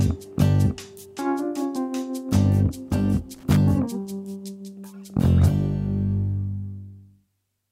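Loose connector crackle appears at 3.34 s and runs to 3.56 s, a burst of about 0.22 s of irregular scratching and crackle laid over the audio. The pattern points to a worn or dirty contact somewhere in the signal chain making and breaking as it shifts. Each interruption chops the signal, and any DC present on the line turns those breaks into pops, which gives the burst its ragged texture.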